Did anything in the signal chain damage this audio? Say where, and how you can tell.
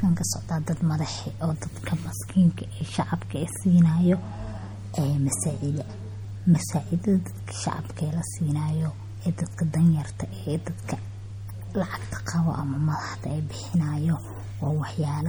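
Yes, at the codec stage: watery, swirly smearing runs throughout the speech, likely MP3 compression near 48 kbps.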